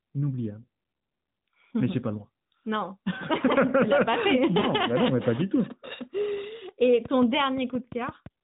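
At 4.60 to 4.67 s the speech briefly smears into a short warble and dips, then returns slightly rough. These are lost AMR speech frames: about 40 ms, which fits two frames failing their checksum, so the decoder repeated the last good pitch and vocal-tract settings at falling gain.

From 7.05 to 8.27 s a train of clicks ticks over the narrowband, sub-4 kHz audio at a regular 5.8 per second. That makes about seven similar pops peaking about 5 dB above the signal, audible in pauses too. The likely cause is interference from nearby equipment or a faulty connection or power supply.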